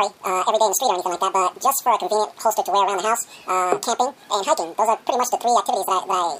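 Audio read two samples at a time (double speed) affects the whole clip, from start to finish. The reader has treated each pair of samples as a single frame, as if the data held two channels or samples twice as wide, so the sound plays at 2x speed and sits 12 semitones, a full octave, above where it belongs.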